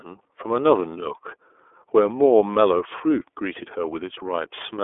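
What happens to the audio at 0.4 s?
At 0.4 s the speech sounds thin, boxed-in and slightly rough and synthetic, with nothing above about 3.7 kHz. This is iLBC codec damage, present throughout: each frame, which fits 30 ms frames near 13.33 kbps, is coded independently within a 300 to 3500 Hz telephone band.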